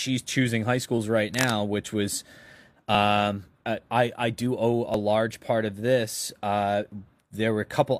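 A speech clip with two kinds of fault. From 1.34 to 1.53 s, just before "which was", a burst of scratching noise sits nearly as loud as the voice, likely cable scratch noise from a worn contact being moved. At 2.95, 4.94 (just before "large part of this") and 6.92 s (right after "part of this uh"), brief skips recur every 2 s. These are an overlap between stream segments, where a few tens of milliseconds are trimmed at each segment join.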